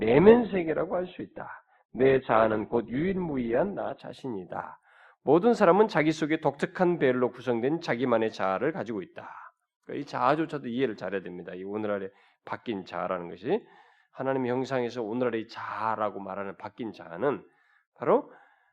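For the first 4.0 s this is an adaptive stream starting at a low bitrate: the speech is dull and smeary, with nothing above 4.4 kHz, then it snaps cleaner with no gap, consistent with something like Opus moving from about 12 to 64 kbit/s.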